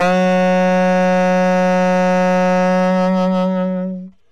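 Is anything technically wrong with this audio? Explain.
No, nothing is technically wrong with this audio.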